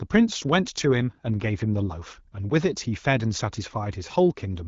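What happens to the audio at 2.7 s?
Nothing goes wrong at 2.7 s: the speech there carries on intact, with the light, clear character of AMR wideband (HD Voice) coding at 12.65 kbit/s.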